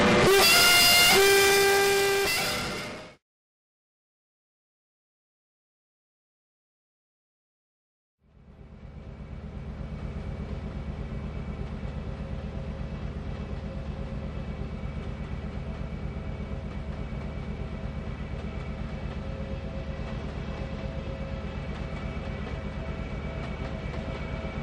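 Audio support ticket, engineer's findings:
Nothing to flag on this one: had a good listen through and there's no fault here worth raising on the ticket.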